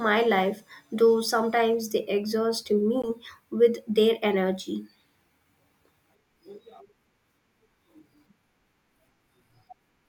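A Bluetooth dropout interrupts this speech clip, most likely because an audio packet failed to reach the headphones in time and was discarded, leaving the output with nothing to play. The result is a gap of silence from 3.02 to 3.09 s, falling between "though sometimes they exhaust" and "with their energy". The speech cuts out and then picks up further along, as though it had kept running underneath. The brevity of the hole fits a single lost packet.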